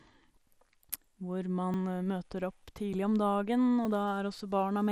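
MP2 compression runs through the whole speech clip. The likely cause is MPEG Layer II coding at a low bitrate, on the order of 80 kbps. With too few bits to share among its 32 sub-bands, the encoder shuts off the top bands and quantises the rest coarsely, so the speech sounds dull and carries a plainly audible gurgling, granular roughness, like low-rate digital radio.

A dropped buffer (overrun) is heard at 1.74 s, 2.93 s and 3.85 s, each a small jump forward in the speech. No silence fills the gaps. The likely cause is the software falling behind so the hardware overwrote samples before they were read, losing roughly 30 ms, 20 ms and 10 ms respectively, with the audio on either side butted straight together.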